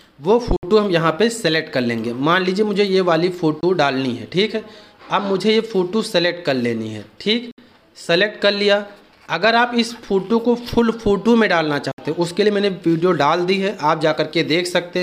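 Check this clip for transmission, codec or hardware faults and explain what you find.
Four brief holes break up the audio, most likely a Bluetooth dropout: 0.56–0.63 s, 3.61–3.63 s, 7.51–7.58 s and 11.92–11.98 s. Three gaps last about 64 ms and one about 21 ms, lengths that fit whole packets of roughly 21 ms going missing. The sound cuts to silence and returns mid-stream, skipping ahead as though it had kept playing, which separates this from an underrun gap, where playback pauses and then resumes where it stopped.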